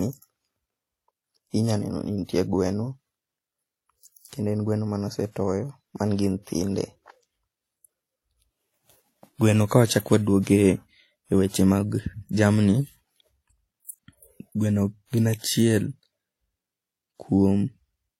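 Speech throughout shows transcoding between lossy codecs: two layers of coding artefacts heard at once and a dull band-limited top end. The sound points to a likely chain of an older WMA-style encode at moderate bitrate, then low-rate HE-AAC.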